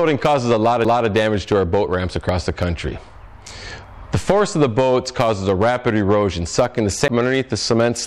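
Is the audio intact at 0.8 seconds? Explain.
No, there is a CD skip at 0.85 s: the laser jumps to another turn of the disc's spiral, so the sound mutes for a few milliseconds with a tick and resumes from a different point.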